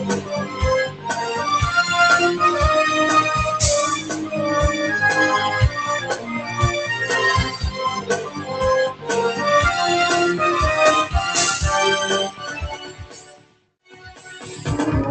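A noise suppressor built for speech stays active on non-speech audio throughout. It treats sustained tones and decays as noise, so the level swings by about 10 dB and held sound pumps and thins while onsets pass through.

These are sounds cut by the noise suppressor: it misjudges sustained passages as noise and pulls them down, at 0.2–0.61 s, 0.86–1.12 s, 4.0–4.33 s, 6.0–6.58 s, 7.98–8.6 s, 8.9–9.09 s and 12.29–14.46 s. Drops reach about 8 to 13 dB, and the last is a two-second sag. The sound passes through an Opus call path at around 32 kbps, limited to 8 kHz.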